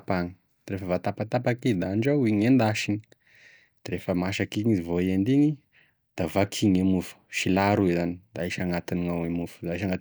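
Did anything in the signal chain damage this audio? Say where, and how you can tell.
No, nothing in this speech recording stood out as damage from any stage of the signal chain on listening.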